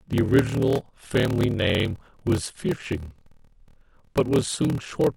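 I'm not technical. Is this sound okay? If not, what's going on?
No. A steady low buzz runs under the speech for the whole clip, about 38 times a second. The talking also feels slightly slow, about 11 percent slower than normal, yet the voice keeps its character. This is a block size mismatch (padded). One part of the system hands over chunks of sound that are too short, which fits chunks of 1024 samples. The next part fills each gap with silence. Those tiny silences make the buzz and stretch the timing.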